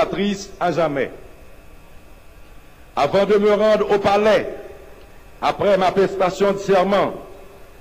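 No faults to report: nothing in the audio points to a problem anywhere along the chain.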